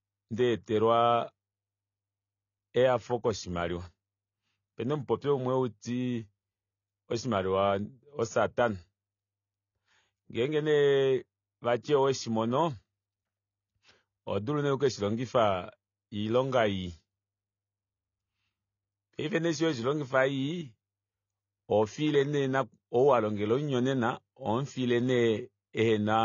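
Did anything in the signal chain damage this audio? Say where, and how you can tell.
Yes. Throughout the speech, the sound is dull and smeared, with plainly audible codec damage and nothing above 7 kHz. That points to the codec stage, likely AAC compression at a low bitrate, consistent with roughly 24 kbps AAC-LC, trimming bandwidth and quantising coarsely to save bits.

At 11.82 s, a brief hiss about 18 ms long comes just before a sharp attack, which then sounds softened. This is pre-echo from the same transform codec: quantisation noise sized for the loud onset spreads back through its block into the quieter moment ahead.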